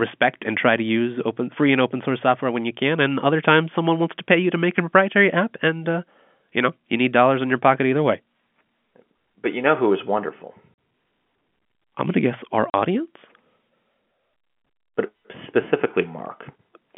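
At 10.74 to 10.77 s and again at 12.70 to 12.74 s, this speech loses packets in transit, and the receiver plays silence where the missing audio should be. Each dropout cuts about 40 ms of audio, which fits a run of four 10 ms packets, so the speech is chopped by abrupt holes. The signal snaps off and back on at their hard edges, and the narrow telephone band of the G.711 line carries through on either side.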